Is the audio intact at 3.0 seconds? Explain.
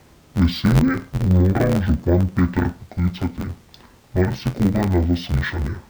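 No. At 3.0 seconds, as throughout the clip, interleaved audio is being read as planar: each block of about 11.6 ms, which fits a 512-sample buffer, has its first half taken as left and its second half as right. The speech therefore sounds dull and robotic, with a buzz at about 86 Hz and no clear octave drop.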